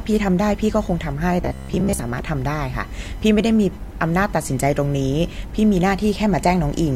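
Computer activity noise runs through the whole of this speech clip: a faint buzzing, chirping texture pulsing at around 1 kHz and sitting roughly 30 dB below the voice. It rises and falls with the machine's own workload rather than with the speech, because processor, graphics or mouse activity shifts the ground the audio circuit shares with the computer, and those current changes leak into the signal as a background scratch. Robotic sound from repeated short buffers appears from 1.42 to 1.99 s, where the voice collapses into a rigid, metallic drone at 66.7 Hz that still loosely tracks the speech. The likely cause is audio arriving too late, so the software keeps replaying its last fragment, about 15 ms long to match that buzz, filling most of the gap with repeats while the real audio in between is lost.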